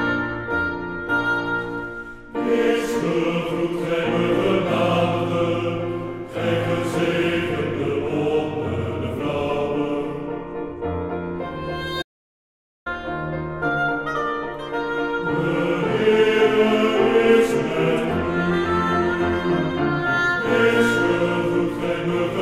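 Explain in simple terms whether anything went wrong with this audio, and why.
At 12.01 seconds the sound cuts out mid-flow and stays silent for about 0.84 seconds, picking up again at 12.87. This is a playback stall: the player likely ran out of data or was briefly held up, so nothing reached the speakers until it recovered.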